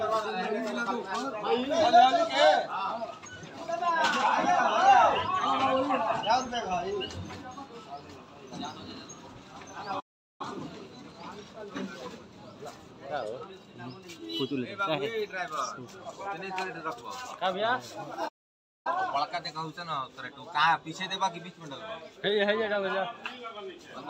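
The player most likely ran short of data or had its output thread held up, and each time the audio output simply stopped until it caught up again. These are two playback stalls: the sound cuts out mid-flow from 9.99 to 10.41 s, a gap of about 0.4 s, and again from 18.28 to 18.87 s, a longer silence of about 0.57 s. In both cases the sound then resumes abruptly.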